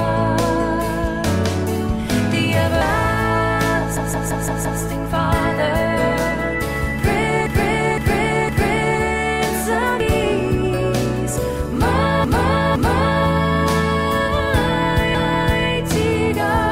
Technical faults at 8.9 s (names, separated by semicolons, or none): repeated frames